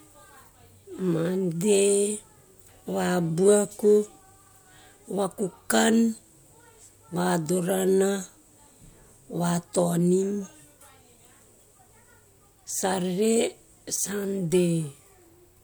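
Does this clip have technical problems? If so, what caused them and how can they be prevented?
No, no faults are audible.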